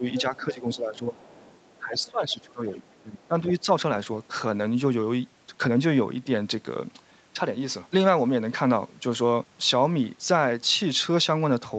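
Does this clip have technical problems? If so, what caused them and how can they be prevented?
Yes. Speech suppressed in double talk: at 0.00–0.05, 0.22–1.19, 1.78–2.86 and 3.04–3.68 s the speech dips by about 10 to 15 dB, likely because the echo canceller mistook it for echo while both sides spoke. Prevention: use a double-talk detector or adaptive filter that holds its estimate during overlap.

The other side's voice leaking through: a second voice comes through at 0.15–0.21, 1.19–1.78, 2.01–2.10 and 2.88–3.02 s, about 10 to 35 dB below the speech, likely residual loudspeaker echo. Prevention: use a headset or lower the loudspeaker volume.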